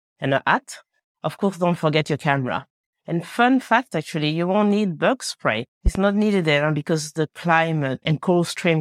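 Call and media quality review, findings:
Loud pop, a double pop between 5.86 and 5.99 s. Sharp transients roughly 15 dB above the speech, which continues underneath. Likely cause: a sudden voltage step from a plug, switch, static discharge or driver glitch, shaped by downstream circuitry.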